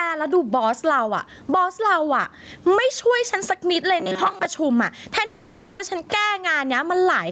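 A speech recording with gain pumping from start to finish. Loud and soft parts are pulled closer in level, with a swing of about 20 dB. That points to an input gain set far too high, with a fast limiter likely clamping it. From 4.00 to 4.46 s the speech turns into robotic sound from repeated short buffers, a rigid metallic buzz at 188 Hz that still loosely tracks the syllables. A fixed pitch like this comes from one short chunk of about 5.3 ms being replayed over and over, likely because audio arrived too seldom, with roughly half the material replaced. A codec artefact would sound smeared or watery, not locked to a single pitch. From 5.25 to 5.81 s there is a long network dropout. About 540 ms of audio is lost and is covered entirely by a fading synthetic continuation, with no true silence. Speech then resumes further on, with that stretch missing. The likely cause is packets failing to arrive for over half a second. 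The fill runs the whole gap, so it is far longer than the brief glitches of a single lost packet.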